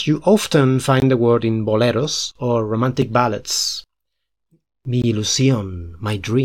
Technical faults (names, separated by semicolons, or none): gap between stream segments